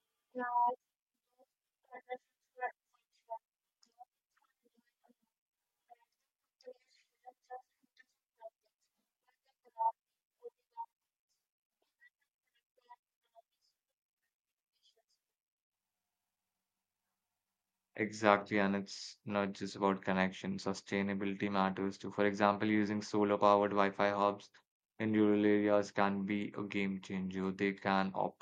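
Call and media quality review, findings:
Nothing to flag on this speech recording; no faults heard anywhere in it.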